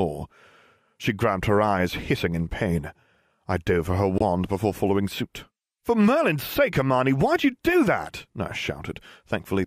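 At 4.18 s a corrupt frame was muted: bit errors damaged a short run of compressed frames, the decoder rejected them, and the player substituted silence rather than guess at the missing audio. The speech drops out abruptly and stays gone until 4.22 s, a 40 ms hole that fits a few short codec frames being lost together. Timing survives the gap, so the speech resumes exactly where it should, with no drift or stretching.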